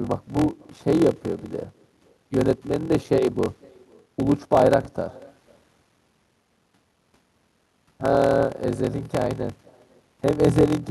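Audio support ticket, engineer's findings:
Echo with no canceller, whole clip. Far end playing the call on a loudspeaker, its mic recapturing it, no echo canceller removing the return. Speech shadowed around 0.4 s later by a quieter, thinner copy, about 28 dB down.

Block size mismatch (padded), whole clip. Upstream stage writing shorter blocks than the next stage reads, which fits a 1024-sample read. Remainder of each block zero-filled, so a short gap lands every block. Audible as a 43.1 Hz buzz. Speech running at 0.861x speed.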